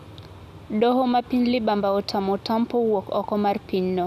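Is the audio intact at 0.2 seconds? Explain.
Yes, the audio is intact at 0.2 seconds, with the speech there free of any dropout, click, distortion or other audible fault.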